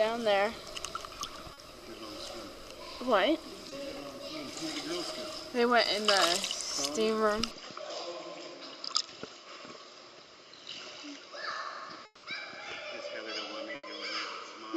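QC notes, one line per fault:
1.53–1.59 s and 3.69 s, short concealed packet loss: about 40 ms and then 20 ms of audio never arrived, so the decoder extended the preceding sound and crossfaded back. Each is heard as a brief smear or wobble. On a spectrogram, the harmonics or noise are briefly frozen and smoothed.
7.51 s to end, input switched to a poorer device: the sound abruptly turns duller, with nothing above 7.6 kHz, and a faint new noise floor sits roughly 55 dB below the signal. There is no gap and no clear level jump. This is likely a change to a narrower-band microphone. On a spectrogram, the energy is sharply cut off at that frequency from this point on.
12.05–12.25 s, long network dropout: about 180 ms of the sound was replaced by a continuation that buzzes or hisses and fades, with roughly 30 ms of silence before the audio resumes. The missing stretch is never recovered, which points to a stalled network stream. 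On a waveform, the envelope decays smoothly into a flat gap.
13.75–13.85 s, burst of packet loss: about 80 ms in a row went missing. The receiver extended the last sound as a held tone or hiss and lowered its level over the gap, then resumed with that portion skipped. On a spectrogram, a fading, static band bridges the hole.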